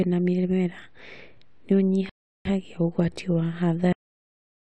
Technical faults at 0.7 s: none

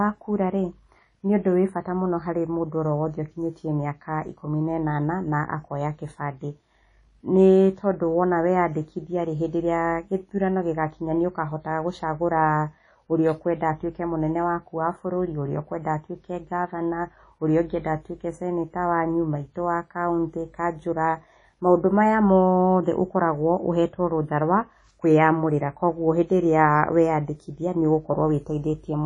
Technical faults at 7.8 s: WMA compression

